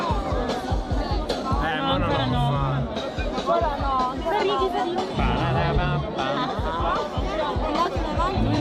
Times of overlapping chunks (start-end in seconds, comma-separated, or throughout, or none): none